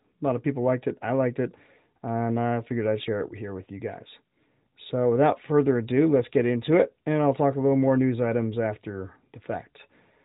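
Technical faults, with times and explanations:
No technical faults detected.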